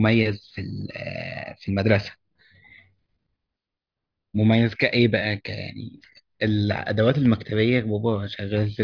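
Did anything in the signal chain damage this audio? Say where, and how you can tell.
No, no damage can be heard.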